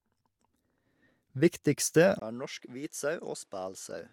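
Input switched to a poorer device, likely, at 2.19 s: after a 20 ms gap, speech runs roughly 10 dB quieter, cut off above 12.4 kHz, with faint new background noise.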